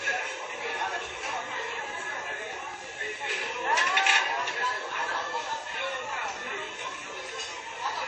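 Throughout, the sound is dull and washy, with nothing above 8.4 kHz. This is likely WMA compression, heavily damaged, which fits a bitrate around 32 kbps.

From 1.69 to 6.58 s, a train of clicks ticks steadily at about 9.6 per second, roughly fifty in all. They peak about 10 dB above the sound.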